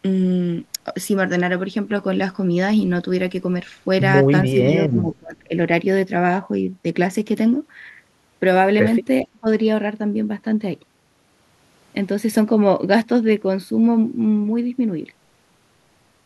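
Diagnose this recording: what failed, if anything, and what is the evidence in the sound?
This one sits in call processing: the speech gets pushed down in two spots, from 4.9 to 5.53 s and again from 9.23 to 9.46 s. The first dip is the deep one, something like 25 dB at its worst, under half a second of real loss. The second is briefer and a bit shallower. It's likely speech suppressed in double talk, where the echo canceller heard both ends at once, couldn't tell our talker from the loudspeaker echo, and ducked everything.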